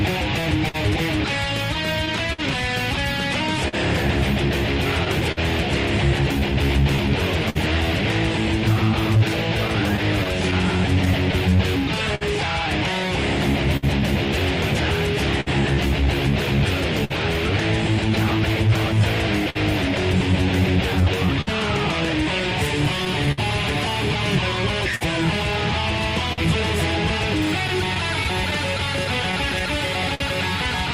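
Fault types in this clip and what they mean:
Clock drift between sender and receiver: The sender's clock runs roughly 4% slow, so the jitter buffer keeps draining and the receiver stretches or repeats short pieces. Small hiccups recur unevenly throughout, showing on a spectrogram as briefly frozen or duplicated slices.
Scattered short gaps: Lost or late packets, around ten from 0.41 to 7.57 s, ten from 9.68 to 17.12 s and fifteen from 21.41 to 30.22 s, each at most about 50 ms, are patched by continuing the last sound. These appear as brief smeared, flattened patches.
Repeated timing corrections: From 6.39 to 29.67 s the receiver keeps inserting short pieces, playing at 99% speed and adding around 150 ms in total. The edits all lengthen the sound at uneven spacing. A waveform shows small duplicated cycles.
Short stall from a late packet: At 19.50 to 19.57 s a packet arrived late and the buffer ran empty, so the last sound was held for 53 ms with nothing lost. 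A spectrogram shows a frozen horizontal band, and the waveform shows repeating cycles.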